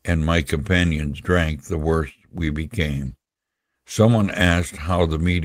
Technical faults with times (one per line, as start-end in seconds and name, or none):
3.05-3.07 lost packet rebuilt from error correction
4.11-4.29 lost packet rebuilt from error correction